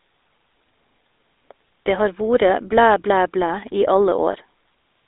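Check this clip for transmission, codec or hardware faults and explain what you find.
Two faults are audible: coding damage across the whole clip and one brief dropout near the end.

GSM full-rate codec, throughout: the coder models the vocal tract and drives it with sparse pulses, giving buzzy, gravelly speech within a 300 Hz to 3.7 kHz band, which fits the 13 kbps GSM coder.

Lost GSM frames, 4.32 to 4.34 s: a missing 20 ms stretch, consistent with a single frame, was filled by repeating the previous frame's settings, producing a short rough, metallic ring.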